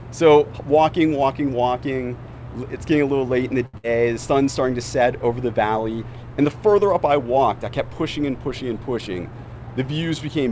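A packet arrived late at 3.66 s and the jitter buffer ran dry, producing a short stall from a late packet: the receiver stretched the last sound for about 76 ms until 3.76 s, then resumed where it had stopped, so nothing is lost but a sound is held too long. Right after that, a burst of packet loss from 3.78 to 3.85 s meant packets never arrived in time. The receiver continued the last sound for about 58 ms, fading it out, and then jumped ahead, so about 60 ms of audio is missing. Later, from 8.99 to 9.75 s, a jitter buffer speed-up was trimming the excess delay that had built up. The receiver repeatedly cut out short pitch-period-sized pieces, around 70 ms in total, so the audio plays at about 109% speed with unchanged pitch and sounds hurried. All of this passes through a G.722 call path with nothing above 8 kHz.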